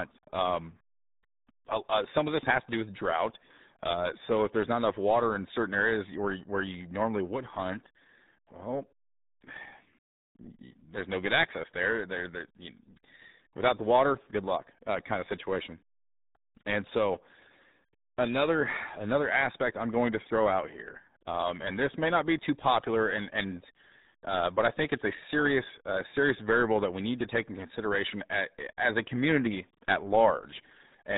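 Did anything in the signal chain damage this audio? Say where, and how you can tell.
Yes, at the codec stage: the whole speech clip has the muffled, gargly character of the RealAudio 14.4 codec, with nothing getting through above about 3.8 kHz. That heavy damage fits a dial-up-era 8 kbit/s speech coder squeezing everything into a narrow band.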